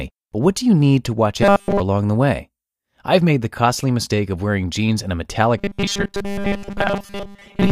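From 1.43 to 1.8 s, the speech turns into robotic sound from repeated short buffers. It becomes a rigid, metallic buzz at 200 Hz that loosely tracks the syllables. The likely cause is new audio arriving too late, so a 5 ms slice is replayed over and over while real audio is dropped. Here nearly all of it is repeated. The same buzz returns at 5.58 s and lasts to the end, with most of that stretch repeated.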